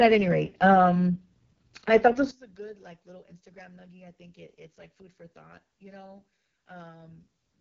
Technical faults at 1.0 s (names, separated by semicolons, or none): AMR wideband (HD Voice) codec